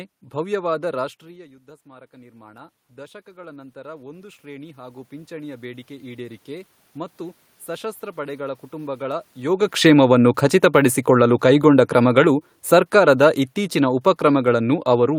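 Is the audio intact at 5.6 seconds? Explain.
No. The voice and room noise swell together from 0.98 to 9.11 s, as automatic gain rising lifts gain about 18 dB after the talker moved away.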